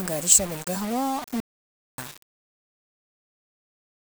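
From the start, the speech carries grainy, signal-following distortion typical of low bit depth without dither, likely rounding to about 6 bits, with error only some 15 dB below the signal. Between 1.40 and 1.98 s, an audio dropout to silence cuts out 0.58 s into silence with no room tone, likely from input loss.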